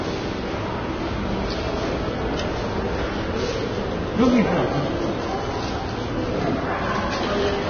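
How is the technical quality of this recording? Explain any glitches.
The technical quality is poor, with one fault running the whole length. The damage is heavy and sounds like Vorbis compression, likely at a very low bitrate near 20 kbps. Nothing remains above 6.5 kHz. The encoder discarded the top band and coarsely quantised the remaining treble over its smooth spectral floor, turning fine detail into noise of similar energy. The result is hissy, grainy texture, roughened tones and smeared attacks.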